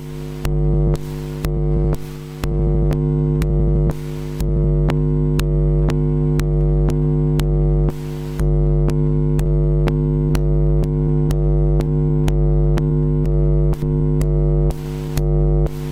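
The sender's clock runs roughly 4 percent fast against the receiver's, a clock drift between sender and receiver that keeps overfilling the jitter buffer throughout these sounds. From 0.74 to 4.64 s, and again from 8.40 s to the end, the receiver makes repeated timing corrections, trimming short pieces to stay in step. Playback runs at 101 and then 103 percent, heard as faint hiccups and a slightly hurried, uneven pace.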